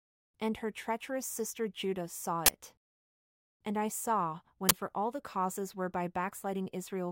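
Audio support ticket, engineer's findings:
Uninitialised buffer, 2.46 s and 4.69 s (between "I saw" and "for all the causes"): loud 23 ms digital-noise bursts. A block played before being written, so stale memory was output. Length fits a 1024-sample block.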